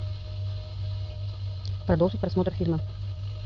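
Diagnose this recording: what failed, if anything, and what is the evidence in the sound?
A time-stretched section runs from 1.14 s to the end of the clip. The speech suddenly moves at about 1.95 times its earlier pace, yet its pitch stays put, so it sounds rushed rather than higher. The stage is software processing, likely a time-stretch applied to make the audio fit a shorter length. To keep the pitch, the algorithm dropped short slices of the waveform and butted the remaining pieces together, producing the hurried texture.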